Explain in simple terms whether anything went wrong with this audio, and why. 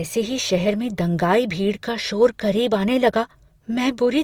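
Opus compression damage runs from start to finish. The speech sounds rough and grainy, likely because a low-bitrate Opus encoder saved bits by keeping only the rough loudness of each frequency band and filling in the finer detail with borrowed or noise-like sound.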